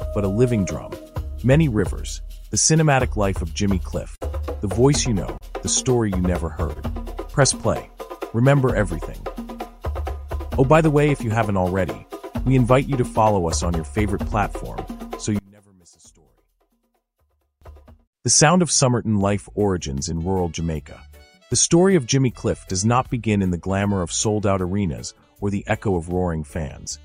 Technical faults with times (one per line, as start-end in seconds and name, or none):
4.15-4.51 short stall from a late packet
5.38-5.44 short stall from a late packet
6.73-6.78 short stall from a late packet
15.39-17.62 one channel inverted